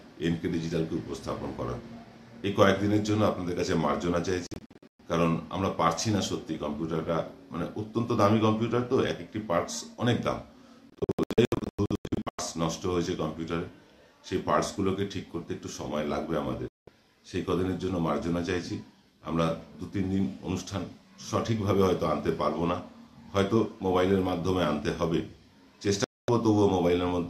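The receiver lost the digital signal or rejected corrupt frames four times, muting until clean frames returned. This digital broadcast dropout sounds like abrupt holes. At 4.47 to 5.0 s, about 336 ms drops out in short gaps, the longest 120 ms. At 10.90 to 12.39 s, 912 ms vanishes in gaps of up to 96 ms. Single silences follow at 16.68 to 16.88 s and 26.04 to 26.29 s.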